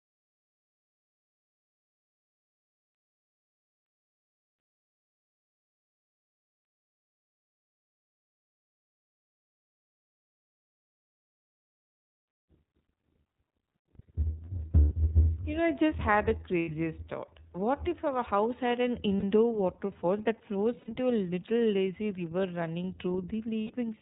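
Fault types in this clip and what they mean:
iLBC codec: The whole clip runs through the iLBC narrowband VoIP codec, which cuts everything above 4 kHz and codes each frame's excitation independently of the one before. The damage is plainly audible: the speech is clear but dull, slightly rough and synthetic, with the sibilance and air of full-band audio gone. The texture fits iLBC's 30 ms frame mode at 13.33 kbps rather than the 20 ms mode.
lost iLBC frames: Six dropouts occur at 12.2 s (about 60 ms), 14.79 s (120 ms), 16.59 s (90 ms), 19.19 s (60 ms), 20.79 s (90 ms) and 23.62 s (90 ms). At each one the decoder's concealment repeats the last pitch cycle mixed with noise, so the gap sounds like a held, faintly buzzy or breathy vowel. The lengths are whole multiples of 30 ms frames. Because iLBC frames stand alone, the speech returns cleanly almost at once.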